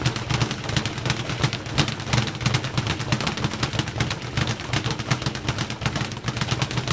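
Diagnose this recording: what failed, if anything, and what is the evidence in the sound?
Nothing failed here: the sound simply came through a call connection, with no content above 8 kHz, which fits a wideband codec like G.722 doing its normal job.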